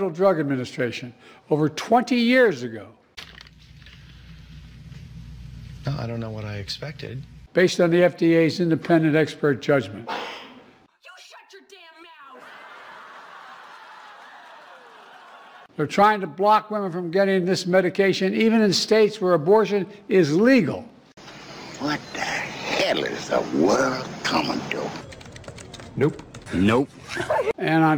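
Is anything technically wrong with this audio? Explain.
Yes, two faults can be heard.

Sample clock jitter runs through the whole clip. The converter's timing wanders by something on the order of a couple of microseconds, so each sample lands slightly early or late. Where the waveform changes fastest, that timing slip becomes an amplitude error, roughly 35 dB below the signal. It comes across as a faint hiss or grit riding on loud, bright passages and disappearing in the quiet gaps.

A corrupt frame is decoded from 24.27 to 24.30 s. Damaged bits in what sounds like a single compressed frame were played instead of being concealed, so misread gains and codes scatter energy into frequencies that don't belong there. For about 26 ms this produces a short, unnatural chirp or noisy blip that stands apart from the surrounding sound.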